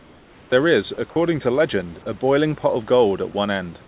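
From 0 to 0.52 s, the sender likely stopped transmitting during the opening pause, leaving the receiver to synthesise comfort noise in place of the background. The room's real background, about 30 dB below the loud parts, becomes a flat, featureless hiss, about 5 dB quieter, until speech begins.

At 0.94–0.98 s and again at 3.32–3.34 s, the voice detector likely misjudged quiet speech or a word ending as background and cut transmission, so this is sound dropped by the voice detector. About 20 ms and then 10 ms of speech vanish, briefly replaced by comfort noise before the speech returns.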